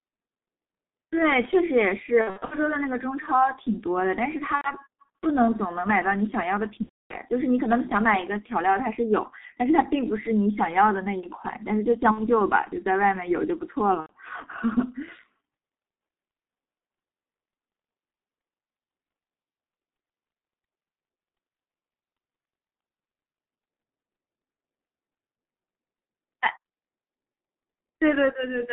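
G.723.1 codec damage runs through the whole recording. The speech is band-limited to about 200 Hz to 3.6 kHz and sounds muffled and hoarse, with smeared consonants. The coarse, slowly updated voice model fits the roughly 6.3 kbit/s mode of this 30 ms-frame codec.

VoIP packet loss concealed by the speech codec occurs at 2.21–2.55 s, 4.55–4.73 s, 6.83–7.15 s, 12.11–12.28 s and 14.00–14.13 s. The decoder filled each gap by extending its last pitch and filter with falling gain. The result is a buzzy tone or a coloured noise that fades, and the voice stays weak briefly after each gap. The first gap is broken up over about 300 ms, and the gap at 6.83 s is the longest.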